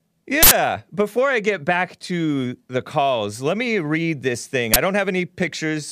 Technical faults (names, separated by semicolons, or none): uninitialised buffer